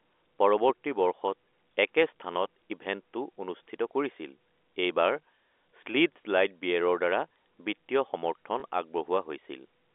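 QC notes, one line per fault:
8.6 s, packet loss with last packet repeated: about 20 ms replays the prior packet, a single lost packet, heard as a small blip, visible as a copied waveform segment.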